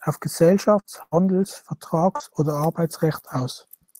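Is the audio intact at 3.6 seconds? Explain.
No. From 3.52 to 3.64 s the speech abruptly drops by about 6 dB, then returns to its previous level. This is likely one channel dropping out. With one stereo channel briefly lost, the mono sum carries only half of the content shared by both sides. That produces the sudden 6 dB dip, and material unique to the missing channel is gone until it comes back.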